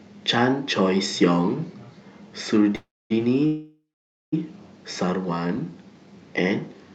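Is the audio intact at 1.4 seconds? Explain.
Yes, the speech at 1.4 s is intact, carried cleanly through the WebRTC call path with its Opus coding limiting the top end to about 8 kHz, and no fault is heard at that moment.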